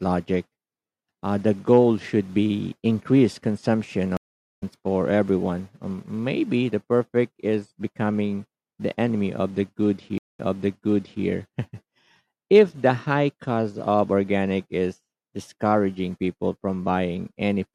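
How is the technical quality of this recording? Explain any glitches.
The speech has two stream reconnect glitches. At 4.17 to 4.63 s the player drops to silence for about 0.45 s, then resumes roughly 0.3 s further on, so a sliver goes missing. At 10.18 to 11.24 s a 0.2 s gap is followed by playback picking up 0.86 s earlier, so you hear a short stretch repeated. Both times the connection broke, the player reconnected and started a fresh decoder mid-stream. In the second case the server resent a burst of recent audio, which is why it jumps backward.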